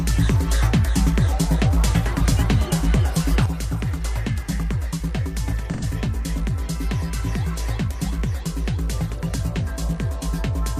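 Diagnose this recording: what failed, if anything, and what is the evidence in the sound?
At 3.46 s the whole signal drops by about 6 dB in a single step and stays down to the end of the file. The sound and the background noise floor fall together, which places the fault in the digital path after capture, and the likely cause is a gain setting or one-bit shift applied without a ramp. That makes it a sudden gain jump rather than automatic gain control, which would glide over tens of milliseconds and pump the noise differently from the sound.

From 5.74 to 5.83 s, roughly 85 ms of the sound turns into a smeared, noisy and phasey patch before clean audio resumes. That duration fits two AAC frames lost between the codec and the decoder, in transmission or storage, with the decoder rebuilding the gap from the last good spectrum. This is AAC frame loss with concealment, not a raw dropout. A raw dropout would leave hard silence or a click with sharp edges, while here the gap is filled with spectrally similar but blurred content.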